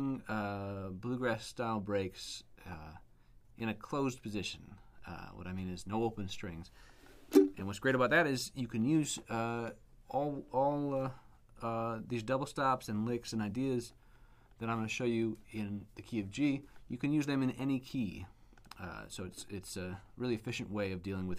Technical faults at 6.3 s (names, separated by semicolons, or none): none